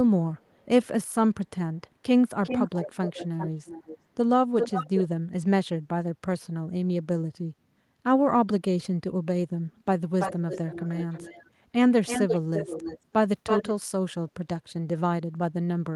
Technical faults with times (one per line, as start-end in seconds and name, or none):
0.37-0.87 echo leak
2.43-3.98 echo leak
4.59-5.05 echo leak
10.20-11.50 echo leak
12.06-12.99 echo leak
13.46-13.86 echo leak
14.68-14.72 echo leak